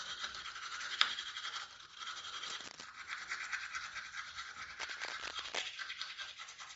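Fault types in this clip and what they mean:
Bluetooth LC3 compression: The whole clip has a grainy, breathy edge, and nothing is heard above about 7.7 kHz, so the top of the spectrum is simply missing. The damage is plainly audible throughout. This is likely low-bitrate LC3 coding as used in Bluetooth LE Audio, which discards much of the upper band and fills parts of it with noise. The texture fits a rate around 32 kbps with 10 ms frames.
Cable scratch noise: Two bursts of dense, uneven scratching and rustling sit over the sound, from 2.45 to 2.88 s and again from 4.80 to 5.66 s. They are loud enough to nearly rival the sound itself, only a few dB beneath it. The likely cause is a worn cable, connector or control being moved, so its contact resistance jumps rapidly and pushes rough bursts of noise into the signal.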